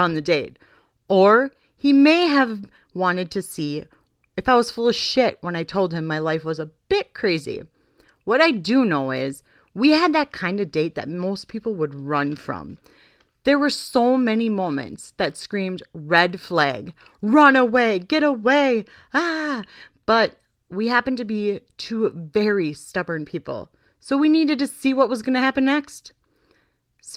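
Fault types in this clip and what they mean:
No technical faults are audible anywhere in this audio.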